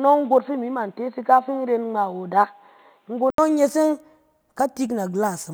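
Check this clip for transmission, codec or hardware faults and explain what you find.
One fault is present: an input switched to a poorer device. From the start to 3.38 s the speech is band-limited, with nothing above 4.3 kHz, so it sounds dull and boxy and carries a faint background noise well below the speech. At 3.38 s there is a silence of 80 ms, after which the full bandwidth returns at the same level. The likely cause is the system moving from a narrowband microphone or headset call profile to the wider-band input.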